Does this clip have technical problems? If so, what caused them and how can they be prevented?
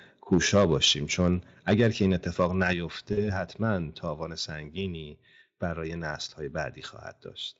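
Yes. From 0.32 to 0.91 s, 1.69 to 2.05 s and 2.4 to 2.68 s the loudest syllables crackle harshly, with the input about 4, 3 and 2 dB over the converter's limit. The likely cause is microphone overload, with the tops of the peaks flattened at the converter. Lowering the microphone's input gain, or moving back from the microphone, prevents this.

At 1.74 s the level drops by about 2 dB, and at 2.73 s by about 5 dB, the second just after a distorted peak. The likely cause is the microphone volume being stepped down by the call software reacting to the clipping. Setting the input level correctly beforehand and turning off automatic gain adjustment prevents this.

From 3.13 to 3.32 s the sound smears and fades, and stays weak afterwards. This is VoIP packet loss concealed by the speech codec. About 40 ms of audio went missing, which fits two 20 ms frames, and the decoder extrapolated from its last state. 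A wired or more stable network connection, or forward error correction, prevents this.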